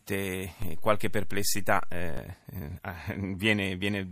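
Speech with a DC step: at 0.62 s the waveform's zero line jumps by about -25 dBFS, giving a low thump, and the offset lasts until 2.17 s.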